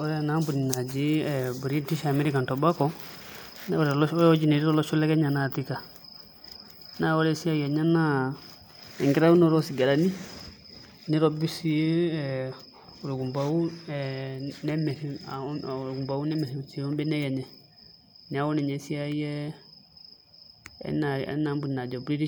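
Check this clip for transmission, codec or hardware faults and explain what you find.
Nothing to report: no transmission, codec or hardware fault turns up anywhere in this speech recording.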